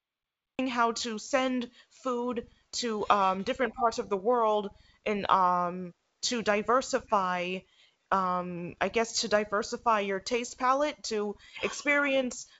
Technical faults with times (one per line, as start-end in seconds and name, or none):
0.00-0.59 cut-off start